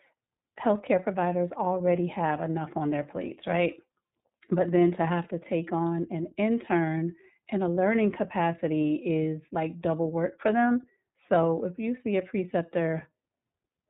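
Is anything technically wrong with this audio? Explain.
Yes. The iLBC codec shapes the whole speech clip. Nothing above 4 kHz survives, so it sounds narrowband. Each frame's excitation is coded on its own. That gives a plainly rough, synthetic edge, which fits 30 ms frames at about 13 kbps.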